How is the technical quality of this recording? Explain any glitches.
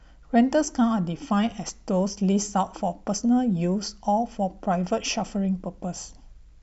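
No glitches can be heard.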